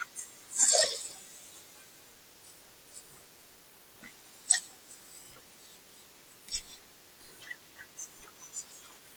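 No audible technical faults anywhere in the speech recording.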